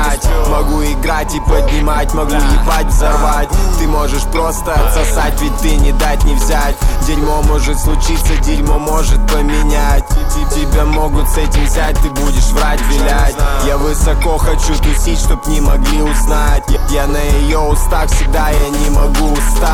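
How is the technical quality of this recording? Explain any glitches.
There is one glitch. From 11.74 to 11.89 s, a loose connector crackle cuts in. A worn or dirty contact is making and breaking as it shifts. This chops the signal on and off, and any DC on the line adds pops. The result is a brief, irregular scratchy burst over the sound.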